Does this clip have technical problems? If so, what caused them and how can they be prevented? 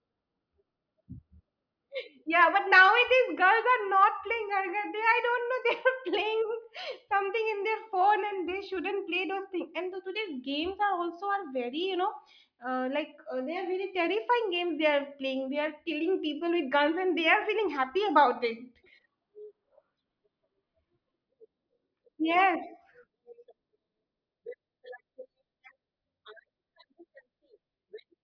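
No, no technical faults heard.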